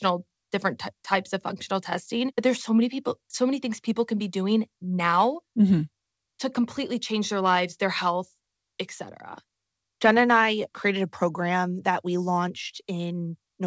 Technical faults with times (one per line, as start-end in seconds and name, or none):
none